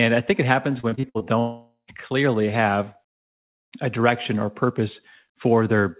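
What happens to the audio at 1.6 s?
Audio packets likely stopped arriving from 1.39 to 1.90 s, a long network dropout. The receiver stretched the last sound into a fading buzz, then left about 0.11 s of silence before speech resumes at "clearly have", with roughly half a second lost.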